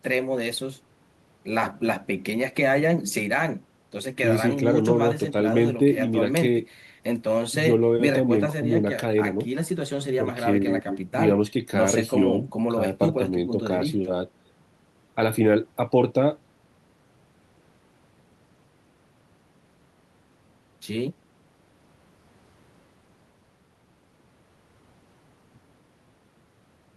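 Nothing in the speech stood out as a technical problem on listening.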